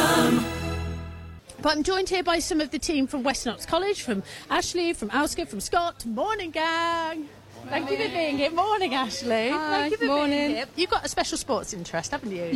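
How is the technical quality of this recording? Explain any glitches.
One glitch stands out, in the last moments of the recording. Crude rate conversion runs from 11.03 s to 12.56 s. The samples were recalculated by straight-line interpolation between neighbours, with no filtering, which fits a change from 48 kHz to 44.1 kHz. Because the two rates line up in a repeating cycle, the error repeats too and produces tones unrelated to the sound, around 30 dB below it. The result is a gritty fizz that rides on the louder and brighter parts.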